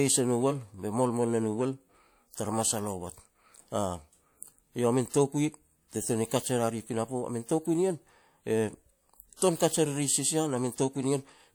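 Speech with two bursts of pre-echo. A short hiss runs ahead of a sharp attack from 5.09 to 5.14 s, about 46 ms, and from 9.36 to 9.42 s, about 57 ms. The transform codec spread noise meant for each loud onset across its whole block, softening both attacks.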